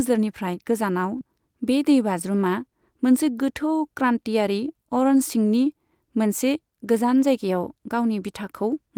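Speech, with a short concealed packet loss from 1.17 to 1.21 s: about 20 ms of audio was missing and about 15 ms was synthesised from what came before, heard as a brief smear. A spectrogram shows a short blurred patch before it blends back into the real audio.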